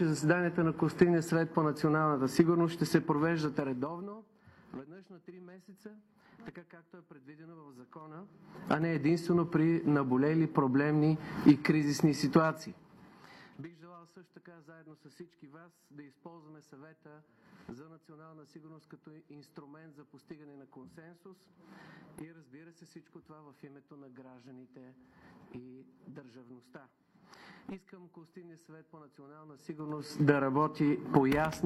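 Audible ticking rides on the level as it falls at 3.39–4.46 s and 12.54–13.14 s, and as it rises at 7.94–9.01 s and 29.44–30.28 s. This is zipper noise. Each move of about 25 dB comes in unsmoothed 3 dB jumps, some 7 to 15 a second, and every jump clicks.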